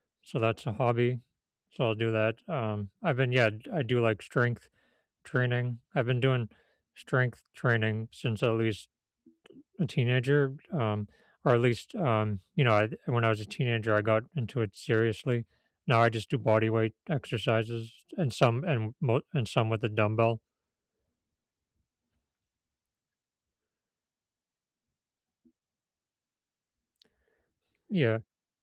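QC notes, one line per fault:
No faults heard.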